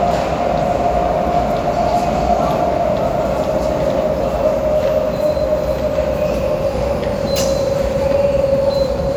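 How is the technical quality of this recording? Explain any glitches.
The recording's technical quality is sound, with no glitches or interruptions to explain anywhere in the audio.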